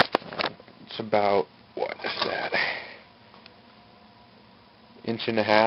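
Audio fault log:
No audible faults detected.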